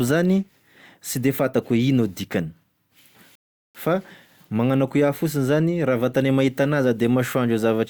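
Speech, interrupted by a rebuffering stall from 3.35 to 3.75 s: playback ran dry, so the audio drops to silence for about 0.39 s, then picks up exactly where it stopped, losing nothing but adding time. A spectrogram shows a clean blank column; the waveform, a flat gap.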